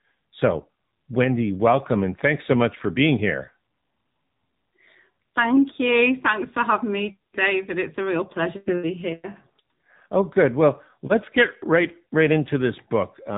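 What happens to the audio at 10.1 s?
At 10.1 s the speech carries the AMR narrowband mobile codec coding that runs through the whole clip. The codec rebuilds each 20 ms frame from a vocal-tract model excited by a few pulses, removing everything above 3.8 kHz. The speech sounds muffled and plainly buzzy and synthetic, consistent with a low mode around 7.4 kbps.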